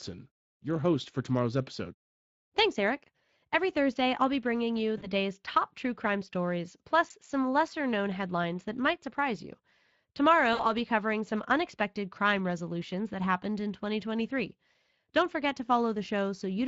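Throughout, the Speex codec has too few bits for its CELP excitation, which fits a bitrate near 20 kbps, so plainly audible codec damage roughens the speech. From 4.97 to 5.07 s and again from 10.53 to 10.67 s, VoIP packet loss concealed by the speech codec covers gaps of 40 and 60 ms. This fits two and then three lost 20 ms frames. Each time, the decoder extends its last pitch and filter at falling gain, giving a fading buzzy tone or coloured noise, and the speech stays weakened briefly afterward.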